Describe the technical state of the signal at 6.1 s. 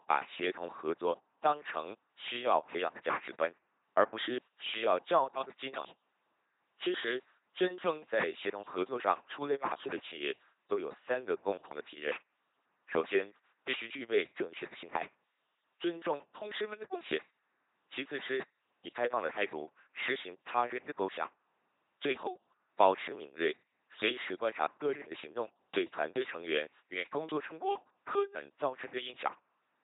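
At 6.1 s the speech runs through an LPC-10 vocoder for the whole clip. A ten-pole filter is excited by buzz or noise, at what sounds like 2.4 kbit/s. The result is heavily robotic, with nothing above 3.8 kHz.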